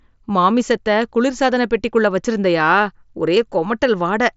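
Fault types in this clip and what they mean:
No fault types occur in this clip; the speech comes over a Bluetooth mSBC headset link, with nothing above 7.7 kHz.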